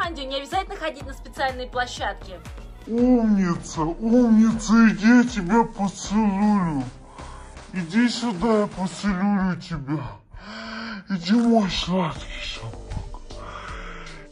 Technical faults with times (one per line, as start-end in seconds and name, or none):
2.86-14.31 section at the wrong speed